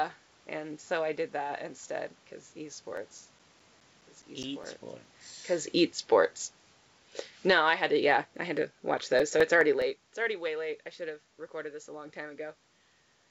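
Right after "did that instead because", from 2.97 to 5.05 s, you get a run of CD scratch ticks: eleven little clicks at roughly five a second, the longest around 10 ms, ending before "because esports." A scratch is wiping out more data than the disc's error correction can rebuild, once per revolution, so the player patches or mutes those samples. The result is that regular tick-tick, of uneven strength.

At 7.35 s the automatic gain falls: the control decides the input is too hot and pulls its gain down by about 10 dB through 7.72 s. You hear the speech sink, and the room background sinks right along with it, which is how you can tell it's the gain stage and not the talker backing off.

Overlapping that, from 7.63 to 8.23 s, the automatic gain rises again by about 6 dB. The control now judges the level too low and brings it back up over about 0.6 s. Voice and background swell together, so the level dips and then partly recovers within about a second.

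The CD scratch ticks come back from 8.36 to 10.03 s: nine clicks, again at about five a second, and shorter this time, the longest around 5 ms. It's the same mechanism as before, where the disc's error correction can't rebuild a damaged patch on each turn and the player conceals the gap. These come through as a rhythmic ticking.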